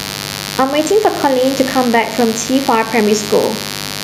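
A mains buzz runs under the whole speech clip. It is a steady, raspy buzz built on 50 Hz. Sharp switching spikes, twice per mains cycle, have leaked into the signal chain. Their harmonics climb into the kilohertz range. The buzz sits about 15 dB below the speech.

Gain pumping is also present throughout. Loud and soft parts end up closer in level, and the sound is squashed. The swing is about 5 dB. The likely cause is gain set far too high, with a fast limiter clamping down on every loud sound.

At 3.44 s there is a bit error spike. It is one sharp, broadband tick with no link to the speech. The level jumps and snaps straight back. That fits a single sample with one flipped bit.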